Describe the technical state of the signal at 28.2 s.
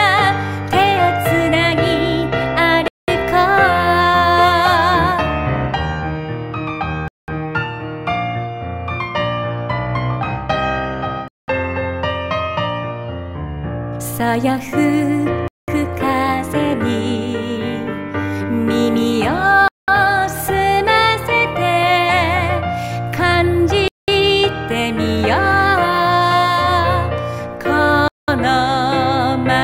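At 28.2 s the signal sits inside a gap between chunks. A hole of silence runs from 28.08 to 28.28 s, lasting 200 ms. The audio was carried in chunks of 4 s, and at this join silence is left between them as dead air. It is heard as a short hole in the sound. Nothing is skipped. The flow is simply interrupted at the seam.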